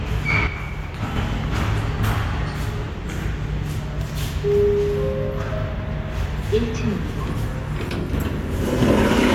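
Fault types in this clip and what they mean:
One channel drops out: the level falls abruptly by about 6 dB from 0.47 to 1.16 s and again from 7.89 to 8.13 s, then returns to its previous level each time. This is the sound of a mono sum in which content shared by both channels is halved and content unique to the missing side vanishes, most likely because one stereo channel was briefly lost upstream.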